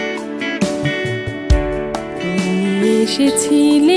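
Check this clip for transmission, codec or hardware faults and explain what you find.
Nothing here points to a transmission, codec or hardware problem; it all sounds just as it should.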